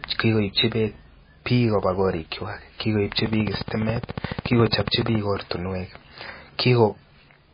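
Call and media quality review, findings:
MP3 compression, whole clip: watery, swirly speech, nothing above 5 kHz, sibilants smeared and metallic. Likely a starved MP3 encode, consistent with a bitrate near 19 kbps: treble cut at a fixed frequency, weak lines dropping in and out per frame.

Train of clicks, 3.19 to 5.16 s, right after "beek biik kobaa korikwak": regular ticking at 14.3 per second, around thirty pulses, peaks about 10 dB above the speech. Probable interference or a faulty connection injecting repeated pulses.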